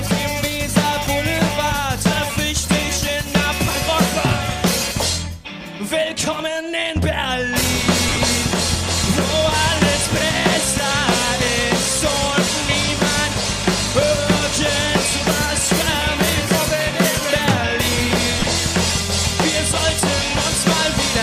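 Lost LE Audio frames break the sound twice, at 8.08 to 8.18 s and 18.39 to 18.46 s. Short scattered gaps, the longest about 30 ms, are each filled with a brief noisy smear where the LC3 decoder repeats the last spectrum with randomised phase. The light lossy compression leaves at most a faint watery texture.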